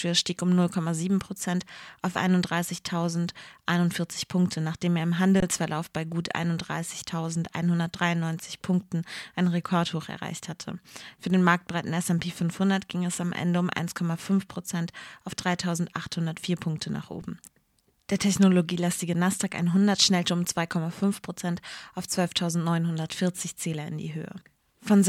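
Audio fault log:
5.40–5.42 s and 17.22 s, underrun with held sample: The speech briefly freezes into a flat, silent hold, about 21 ms at the first point and 5 ms at the second, with little or no click going in and only a soft re-entry. The output buffer ran dry and the converter held its last value. Playback then resumed where it had stopped, losing no audio. The gap lengths fit one 1024-sample buffer and one 256-sample buffer.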